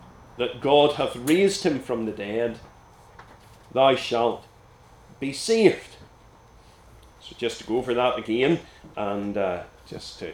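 No technical faults can be heard anywhere in the recording; the signal stays steady and intact throughout.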